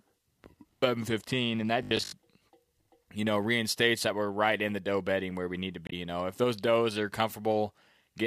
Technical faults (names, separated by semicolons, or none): robotic sound from repeated short buffers; damaged data in a compressed stream